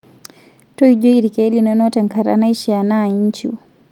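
No audible technical faults.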